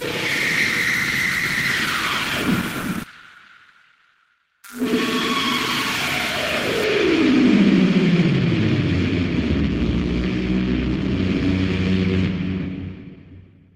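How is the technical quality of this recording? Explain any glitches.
Two glitches affect the technical quality, both around the third second.

From 3.03 to 3.05 s there is a skip ahead: the sound jumps abruptly forward with no gap, and roughly a second of material never plays. The two sides of the missing stretch are spliced almost directly together, so the break is heard as an instantaneous leap. A chunk of audio was discarded in transit or when the jitter buffer overflowed, while later audio was already queued.

Right after, from 3.13 to 4.37 s, a jitter buffer speed-up makes the sound run about 10 percent fast (110 percent speed) while keeping its pitch, giving a slightly hurried feel. The receiver's buffer was holding more audio than its target, so it trimmed many tiny slices of one or a few pitch periods in succession, about 150 ms altogether, to bring the delay back down.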